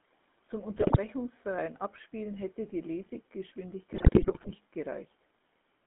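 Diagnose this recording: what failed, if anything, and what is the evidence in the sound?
The speech has gone through a GSM full-rate codec, whose character fits the old 13 kbps channel. The codec rebuilds the voice from a vocal-tract filter fed by a sparse, regularly spaced pulse train. Only a coarse version of the excitation survives, so the whole clip carries a plainly audible buzzy, gravelly roughness. The band is squeezed to about 200 Hz to 3.6 kHz, which removes the top end entirely.

On top of that, the radio link delivered GSM bit errors to the decoder, from 0.76 to 0.97 s and again, longer, from 3.92 to 4.55 s. The sound in both stretches points to an error rate of several percent. Corrupted filter, pitch and gain parameters make individual frames decode with a warped spectrum or a sudden level jump. The speech breaks into squawks, pops and gargling there, lasting about 0.2 s the first time and over half a second the second time.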